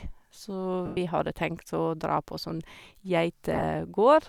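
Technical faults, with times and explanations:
0.86 to 0.97 s, lost LE Audio frames: about 110 ms of the Bluetooth LE Audio stream is missing, and the LC3 decoder repeats the last spectrum with random signs, so the speech becomes a hissy smear that fades over the gap rather than dropping into hard silence.
3.53 to 3.63 s, lost LE Audio frames: 60 ms lost in short runs over 100 ms, none much over 20 ms, giving brief grainy flutters instead of one fading smear.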